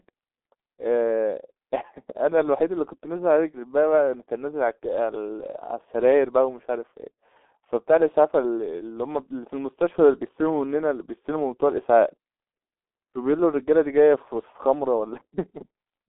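From start to end the speech sounds muffled, hoarse and band-limited, with smeared consonants and nothing above 3.8 kHz, the heavy damage of the G.723.1 codec at 6.3 kbit/s.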